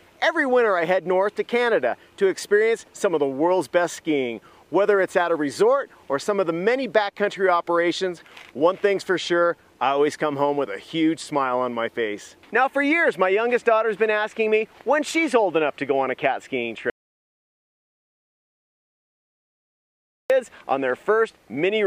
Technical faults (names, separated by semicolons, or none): audio dropout to silence